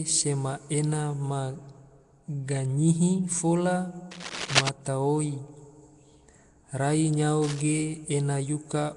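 A rough, hissy halo surrounds the speech the whole way through, with a smeared, underwater quality and nothing above 10.6 kHz. That plainly audible damage is likely Nellymoser compression, the old Flash microphone codec, at a rate that fits roughly 44 kbps. It spends a fixed two bits a sample on short blocks, so weak bands get no bits and are filled with noise. Two bursts of scratching, rustling noise also sit over the speech. The first runs from 4.11 to 4.69 s at roughly the level of the speech itself. The second, from 7.43 to 7.60 s, is about 10 dB quieter. Both are cable scratch noise, likely a worn cable, connector or control being moved so that its contact resistance jumps about and adds dense, uneven noise for a moment.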